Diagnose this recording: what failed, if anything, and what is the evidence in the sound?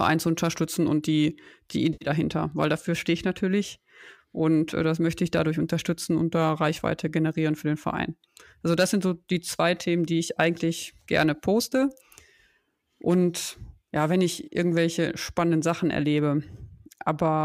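AAC frame loss with concealment at the codec stage: a smeared, phasey patch at 1.93–2.09 s after "unterstützen und die die", and a brief blip near 14.45 s after "ja wenn", where the decoder filled gaps from the last good spectrum.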